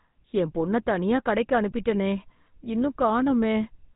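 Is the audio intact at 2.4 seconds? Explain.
No. At 2.4 seconds the speech carries the damage of the GSM full-rate codec, which runs through the whole clip. This codec rebuilds speech from a vocal-tract model driven by regularly spaced pulses, discarding much of the excitation, which points to the early 13 kbps GSM coder. Nothing above 3.8 kHz survives, and the voice has a buzzy, gravelly roughness. A simple telephone band-limit would sound muffled but clean, without this grainy buzz.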